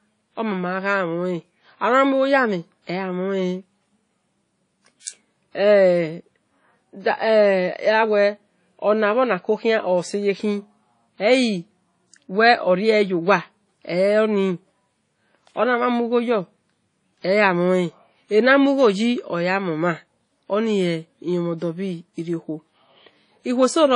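From start to finish the speech carries plainly audible codec damage, most likely WMA compression. Nothing survives above 10.1 kHz, so the top end is sliced off, and the sound rings and goes washy, with a hiss that swells and fades along with the speech. That's a transform codec smearing quantisation noise over long blocks and dropping weak components, which fits a low bitrate of around 32 kbps.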